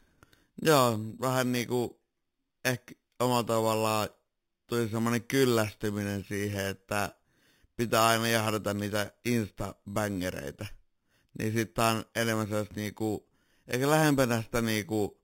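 It's a speech clip with imaging from sample-and-hold upsampling running the whole way through. There's a bright metallic fizz that tracks the speech level, and it sounds like the rate was raised by plain sample repetition from what fits an 8 kHz source. The first mirror image fills 4 to 8 kHz at about 14 dB below the signal, moving opposite to the pitch.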